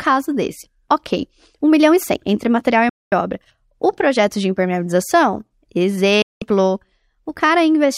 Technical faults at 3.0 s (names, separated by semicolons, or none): digital broadcast dropout